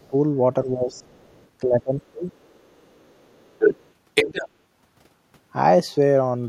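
From 0.08 to 0.14 s the speech dips by about 15 dB, and again from 0.64 to 1.08 s by about 10 dB. This is speech suppressed in double talk. The likely cause is an echo canceller that, with both ends talking at once, could not tell the near talker from loudspeaker echo and attenuated everything. The level sags briefly instead of holding steady.

From 0.96 to 1.47 s the other side's voice is leaking through faintly, about 35 dB under the speech. The likely cause is echo the canceller left in the microphone signal.

From 1.63 to 2.26 s the speech is suppressed in double talk again, far more deeply, about 25 dB. The talker is pulled down, likely because the canceller again gated the near end during overlap.

From 2.33 to 3.91 s the other side's voice leaks through as a long residual stream, about 25 dB down. From 4.14 to 4.48 s it comes through at roughly the same level as the speech. In both stretches this is likely loudspeaker pickup that the echo canceller failed to remove.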